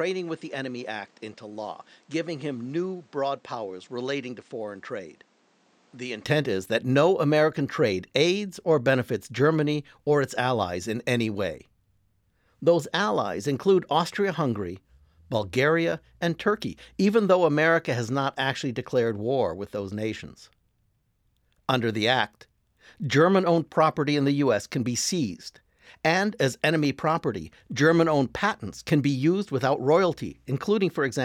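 A speech recording whose first 6.25 seconds sound dull and thin, about 10 dB quieter than the rest, with nothing above 9.1 kHz and a background hiss sitting roughly 30 dB under the voice. At 6.25 s the sound opens up abruptly, without any gap, just before "is that no". That sudden change in bandwidth, level and noise is the signature of an input switched to a poorer device, likely a lesser microphone feeding the opening before the main one took over.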